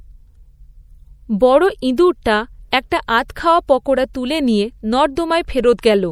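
Throughout this speech clip, plainly audible MP3 compression gives watery, swirling sibilants and dulled treble, likely from a low bitrate around 64 kbps, unlike noise or band-limiting alone.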